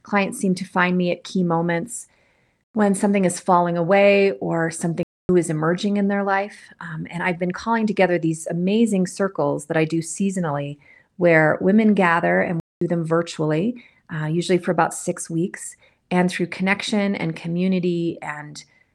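At 5.03 s, after "is falling away or", and at 12.6 s, after "where women gather and", the speech goes silent for 0.26 s and then 0.21 s. These are playback stalls, likely from the player running short of data. The pauses last long enough to register as gaps rather than clicks.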